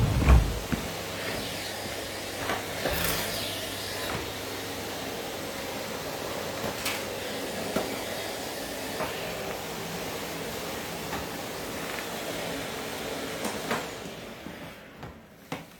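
A recording of everyday sounds with no technical faults to report in its signal.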